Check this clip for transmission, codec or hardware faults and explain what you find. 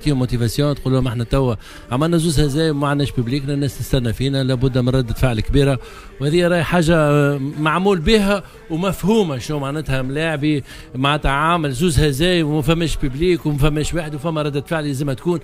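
One hardware fault is present, a phantom power thump near the start.

It runs from 1.02 to 1.11 s. Power was switched on or off on a live input. The sudden voltage step passed through the input's coupling capacitors and reached the signal path as a single low-frequency pulse. It is heard as a deep thump. It peaks at about -14 dBFS. The thump dies away quickly, decaying over roughly 20 ms.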